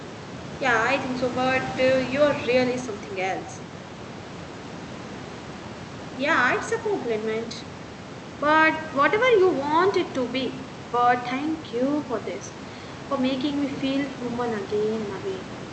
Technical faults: none

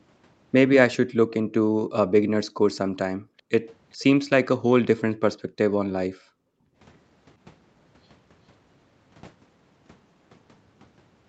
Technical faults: background gated by the echo canceller; echo leak

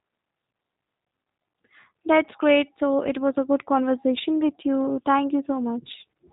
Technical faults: G.729 codec

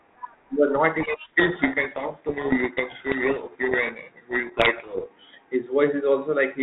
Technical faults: codec payload misread

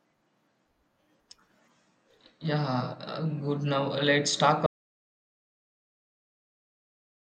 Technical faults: audio dropout to silence

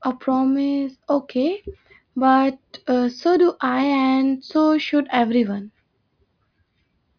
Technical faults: none

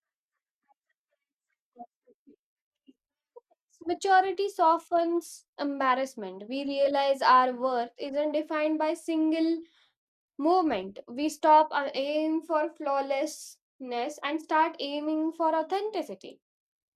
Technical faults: none

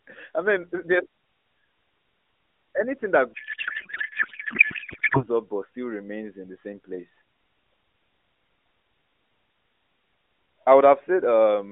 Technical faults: codec payload misread

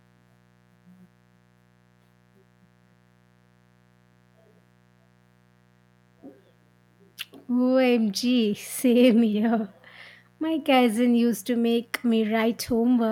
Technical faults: mains buzz

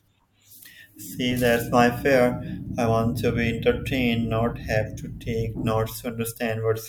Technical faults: none

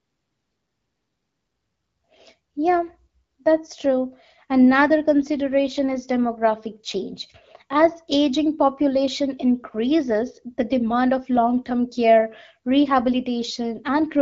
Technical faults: none

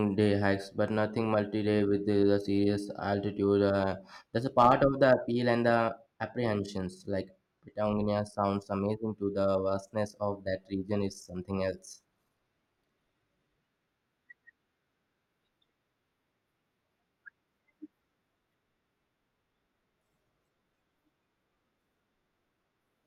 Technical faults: hard clipping

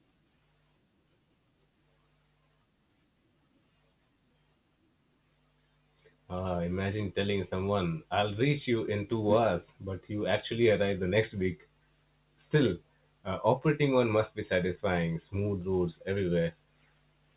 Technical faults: none

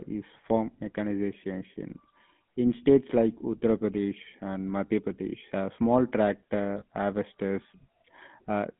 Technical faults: GSM full-rate codec; lost GSM frames

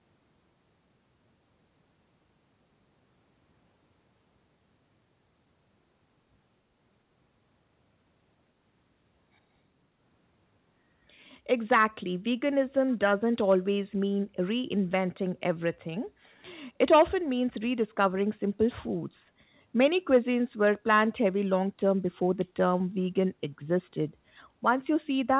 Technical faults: echo leak

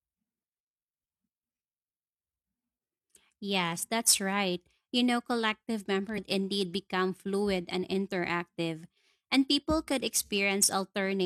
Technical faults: damaged data in a compressed stream

